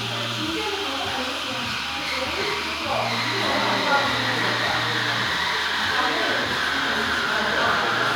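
No technical faults are audible.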